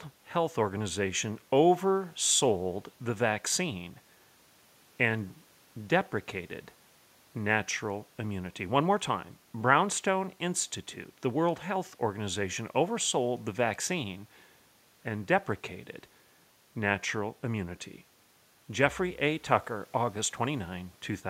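Speech recording with no technical faults to report.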